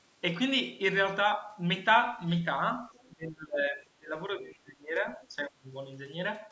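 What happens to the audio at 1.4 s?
Nothing goes wrong at 1.4 s: the speech carries on intact through that moment, with only the ordinary band-limiting of call microphone processing, which trims the lowest bass and leaves nothing above 8 kHz.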